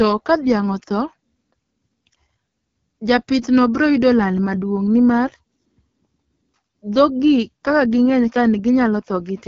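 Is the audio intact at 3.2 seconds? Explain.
No. At 3.2 seconds the speech sounds rough and raspy with nothing above about 7.1 kHz, from the AMR wideband (HD Voice) codec running throughout at a low rate, likely around 8.85 kbit/s.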